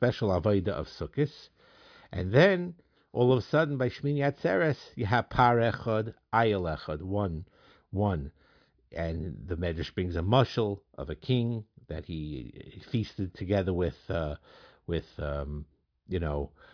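No technical faults are audible.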